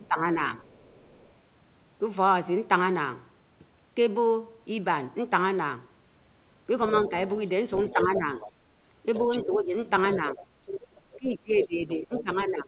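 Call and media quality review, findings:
Speech suppressed in double talk, 0.00–0.28 s and 7.08 s to end (12.68 s). Likely echo canceller unable to separate near talker from loudspeaker echo, attenuating both. Talker's level dips by up to about 15 dB; the opening loses about a fifth of a second.

Other side's voice leaking through, 0.66–1.32 s and 6.88–12.23 s. Likely residual loudspeaker echo not fully cancelled at the microphone. A second voice is audible: very faint early (about 35 dB under the talker), then prominent from 6.88 s (about 10 dB under). Audio is band-limited to 4 kHz, consistent with G.711 A-law at 64 kbps.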